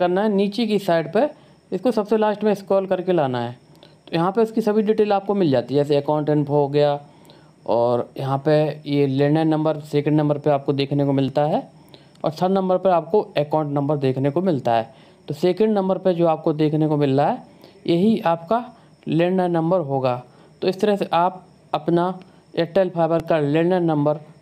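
Repeated buffer faults: three times the device ran short of fresh audio and replayed its last tiny block, about 1.45 ms, which fits a 64-sample buffer. Each hard-joined repeat is heard as a click or brief buzz at 5.28 s, 11.28 s and 23.2 s, the last repeated twice, with essentially nothing lost.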